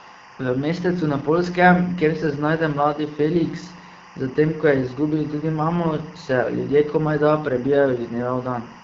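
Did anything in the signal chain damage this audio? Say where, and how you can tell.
Yes. A steady chirping warble sits behind the speech for the whole clip, about 20 dB down, flipping between pitches near 1 and 2 kHz. That is timecode bleed in the analogue wiring: linear timecode, apparently running at 23.976 frames per second, leaking from an adjacent cable or track.

The speech is rough and raspy throughout, with plainly audible coding damage and a hissy, noise-like band from 6.4 to 7 kHz. That points to the AMR wideband (HD Voice) codec at one of its lowest modes, fitting 8.85 kbit/s, where the pulse-driven vocal model cannot capture the voice cleanly.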